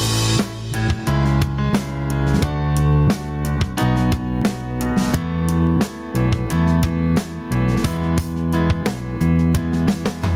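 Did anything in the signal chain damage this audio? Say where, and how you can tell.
Yes. Throughout the clip there is gain pumping, a swing of around 15 dB that squashes the dynamics. The likely cause is input gain set far too high, with a fast limiter clamping every peak.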